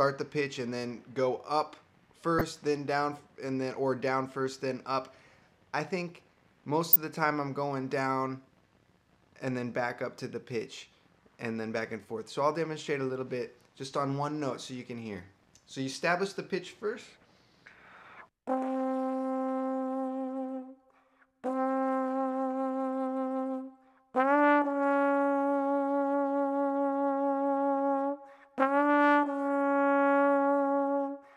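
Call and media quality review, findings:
Corrupt frame decoded: brief chirp-like bursts at 2.39–2.41 s and 6.93–6.96 s, peaking near −15 and −10 dBFS. Decoder played bit-damaged frames; misread codes put energy at wrong frequencies for a couple of frames each.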